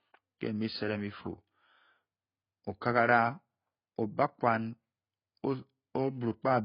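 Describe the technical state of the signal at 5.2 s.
At 5.2 s the speech is likely passing through heavy AAC compression, as for the whole clip, which fits AAC-LC at around 16 kbps. The coder discards everything above 5.1 kHz and starves the remaining bands, so the sound is dull and smeared, with a warbling, fizzy texture.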